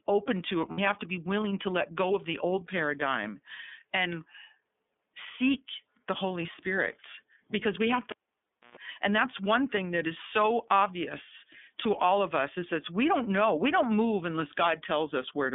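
iLBC codec, throughout: the speech passes only between about 200 Hz and 3.5 kHz, and its 30 ms frames are each coded on their own, leaving a plainly audible rough, slightly synthetic edge. The sound fits the 13.33 kbps mode.

Lost iLBC frames, from 0.71 to 0.79 s: about 60 ms of audio goes missing, which fits two 30 ms frames. The decoder fills the gap by repeating the last pitch cycle blended with noise, giving a brief held, buzzy vowel before the speech snaps back.

Cable pulled and plugged in, from 8.10 to 8.77 s: a pop marks the cable coming out, then roughly 0.63 s of near silence. A burst of 60 Hz mains buzz lasting about 0.12 s follows as the plug's tip makes partial contact, then a second pop as the sound returns.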